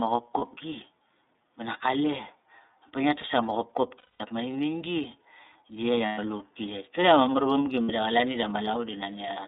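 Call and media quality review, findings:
iLBC codec, whole clip: narrowband speech, band roughly 250 Hz to 3.7 kHz, nothing up top. Plainly audible codec damage, a slightly rough, synthetic edge on the voice. Fits iLBC's 13.33 kbps mode with 30 ms frames, each coded standalone with no carry-over from the previous frame.

Lost iLBC frames, four dropouts where the decoder papers over missing packets by looping the last pitch cycle with some noise mixed in:
0.39–0.43 s: brief held blip, about one frame's worth.
3.98–4.21 s, right after "pa ngia tas tama": longest one, about 210 ms of buzzy sustained vowel that fades out.
6.05–6.19 s: about 120 ms smeared, breathy hold.
7.83–7.90 s, after "mar vamgi": short held buzz, about 60 ms.
Voice snaps back clean right after each gap, since frames decode independently.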